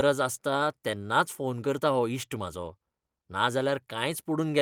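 Clock drift between sender and receiver runs through the whole clip: the sender's audio clock is about 4% slower than the receiver's, so the jitter buffer keeps draining faster than it is refilled. The receiver therefore has to stretch what arrives, and the speech plays at roughly 96% of its proper pace. The result is a faintly sluggish delivery with an unsteady rhythm rather than any single obvious break.

Repeated timing corrections follow from that drift, from 0.04 s to 4.51 s. To keep the buffer from running empty, the receiver repeatedly duplicates short slices of audio, all in the same direction and at uneven intervals, adding roughly 150 ms in total across the stretch. Each repeat is tiny on its own. Heard together, they come across as slight hiccups and a tempo that drags and lurches irregularly through the speech.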